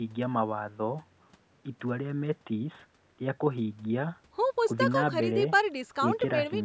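Speech recorded through a call's microphone processing, with room noise sitting about 53 dB below the voice and nothing above 8 kHz, and no technical fault present.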